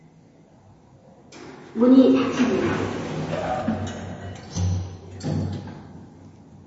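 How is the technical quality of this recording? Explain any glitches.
Technical quality is poor, with plainly audible compression damage throughout. Throughout, likely MP3 compression: the starved encoder removes everything above 7.7 kHz and toggles weak bands, sounding dull and watery; spectrograms show a flat ceiling and flickering holes.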